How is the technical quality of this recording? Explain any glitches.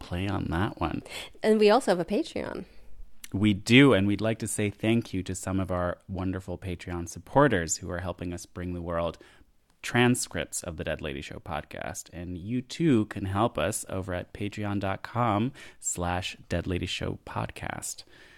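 No technical faults are audible.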